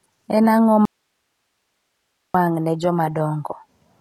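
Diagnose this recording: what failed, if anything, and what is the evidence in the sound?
Sibilants sound gritty and metallic, with synthetic-sounding treble and nothing above 14.9 kHz: HE-AAC compression at the codec stage, likely around 20 kbps, with band replication faking the top octave.

From 0.85 to 2.34 s the speech cuts abruptly to faint hiss about 55 dB down: an audio dropout to a faint residue, likely where the signal was lost while the downstream path stayed live.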